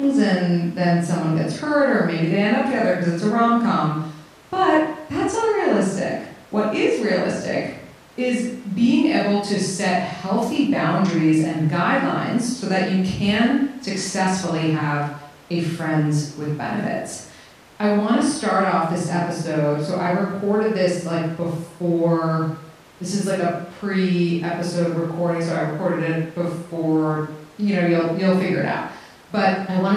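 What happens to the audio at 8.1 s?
Nothing goes wrong at 8.1 s; the speech carries straight through that moment without a dropout, click, glitch or any other audible fault.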